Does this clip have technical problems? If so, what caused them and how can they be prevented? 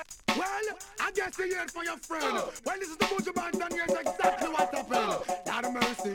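Yes, there's one: a quick burst of damaged data in a compressed stream at about 2.58 s. It's a tiny blip, over almost as soon as it starts. What happens is that a stretch of the encoded data got corrupted, so the decoder couldn't make sense of those frames, briefly lost its place and had to hunt for the next valid frame header before carrying on. That short garble is what you hear. To prevent it, deliver files over a checksummed transfer and make sure nothing, such as inserted stream metadata, gets written into the audio data.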